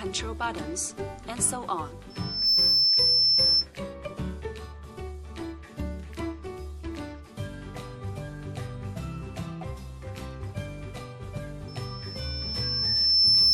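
Loudspeaker feedback squeal appears twice, from 2.10 to 3.67 s and from 11.68 s to the end, both at 5.3 kHz. The loop swells by itself, fast the first time and more slowly the second, to well above the sound. That growth separates it from a steady interference whistle.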